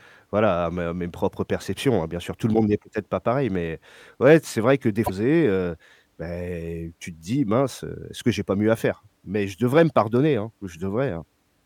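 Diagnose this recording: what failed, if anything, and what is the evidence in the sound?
A 70 ms glitch at 5.03 s, after "c'est vrai que des", is damaged data in the compressed stream: corrupt codec frames knock the decoder out of sync.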